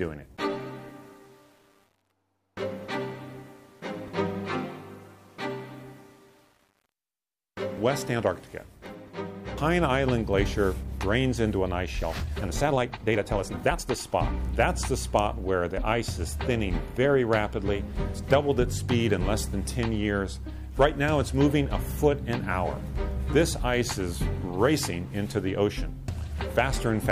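From 12.00 s to 13.88 s the audio runs at 1.63 times its normal pace while the pitch stays put, a time-stretched section. The likely cause is software squeezing that span to fit a length by dropping short pieces, which leaves it rushed.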